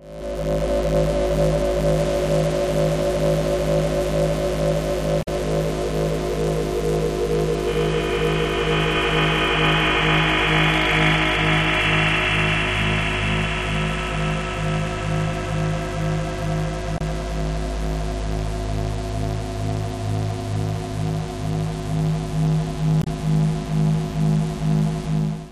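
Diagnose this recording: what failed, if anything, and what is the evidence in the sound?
Damaged data in a compressed stream, at 5.19–5.28 s, 16.94–17.01 s and 23.00–23.07 s: each brief disturbance points to the codec stage. Corrupted bytes make the decoder misread frames, lose sync and resume at the next frame header.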